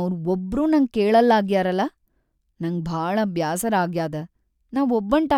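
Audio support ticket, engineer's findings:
No technical faults found on review of the speech signal; level, continuity and channel path all check out with nothing requiring action.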